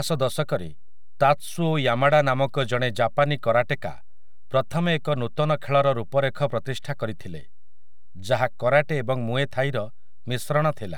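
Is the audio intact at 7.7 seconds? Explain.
No, DC offset runs through the whole speech clip: a constant shift of about -31 dBFS, inaudible but eating headroom, seen as a displaced waveform baseline and steady energy at the spectrogram's bottom edge.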